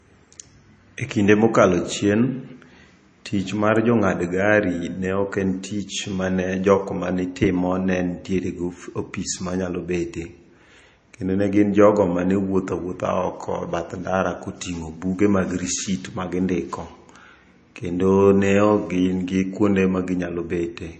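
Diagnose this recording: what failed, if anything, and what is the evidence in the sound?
The fault sits at the codec stage and runs through the whole speech clip. There is nothing above 9 kHz, and the top stops abruptly rather than rolling off, with the smeared, watery detail of a heavily squeezed MP3. This is low-bitrate audio saved at a high bitrate, likely an MP3 at around 32 kbit/s re-encoded at about 212 kbit/s. An analogue or converter band limit would be gentler and free of those artefacts. The later high-bitrate pass restores nothing.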